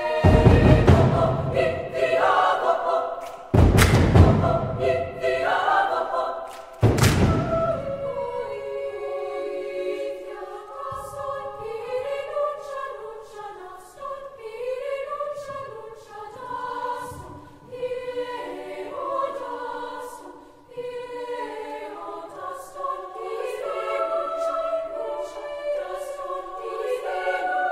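Nothing is technically wrong with this audio.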